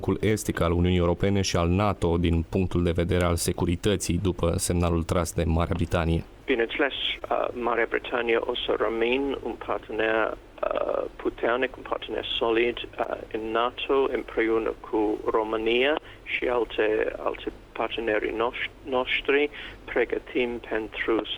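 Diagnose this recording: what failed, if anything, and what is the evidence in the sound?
Short concealed packet loss at 7.19–7.23 s, 13.03–13.07 s and 16.39–16.43 s, at the network stage. Each gap spans about 20 ms, which fits one lost packet. The decoder extended the preceding sound across the hole and blended back, leaving brief smears.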